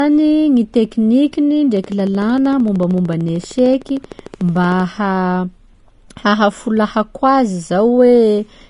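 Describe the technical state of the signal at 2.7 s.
At 2.7 s a train of clicks runs over the speech, from 1.77 s to 4.81 s. About forty clicks arrive at a regular 13.2 per second, peaking about as loud as the speech itself. Interference from nearby equipment or a faulty connection is the likely cause. They sound like steady ticking.

Vorbis compression is also present here. Nothing is left above 10.6 kHz. The treble is quantised coarsely, so fine detail turns to grainy hiss and attacks blur. This likely points to a low bitrate near 35 kbps.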